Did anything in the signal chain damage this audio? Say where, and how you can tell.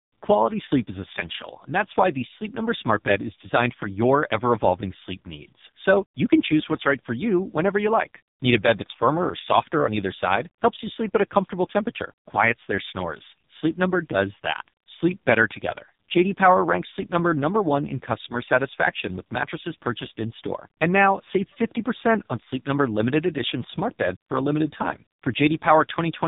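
Yes, at the codec stage, and it runs the whole way through. This is speech squeezed through the AMR narrowband mobile codec. Nothing gets past about 3.8 kHz, so the top end is simply gone. The voice comes out buzzy and synthetic because AMR-NB rebuilds it from a vocal-tract model driven by a handful of pulses per subframe. The damage is heavy, which fits one of its lowest modes, around 5.15 kbps.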